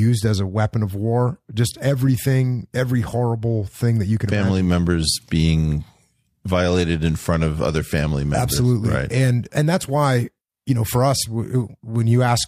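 No technical faults turn up anywhere in this speech recording, so there's nothing to walk through.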